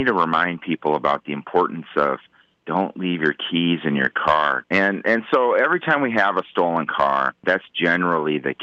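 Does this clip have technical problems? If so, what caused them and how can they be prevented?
No, nothing here is a fault: the audio sits on a normal call path whose codec coloring and top end ending near 8 kHz fit Opus at around 32 kbps, so there is nothing to prevent.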